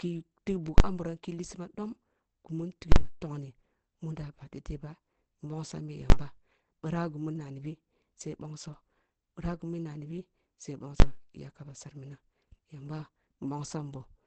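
Speech throughout carries the muffled, hoarse, band-limited sound of Opus compression, likely in its SILK speech mode at about 16 kbps, which fits a wideband setting. A spectrogram shows nothing above 14.9 kHz. Invalid numbers at full scale cause sharp bangs at 0.78–0.80, 2.92–2.96, 6.10–6.12 and 11.00–11.02 s. Each is a 20 ms or 40 ms block where a calculation failed and the output was pinned to the largest positive or negative value. On the waveform these appear as flat slabs far beyond the speech peaks, and on a spectrogram as full-height vertical bars.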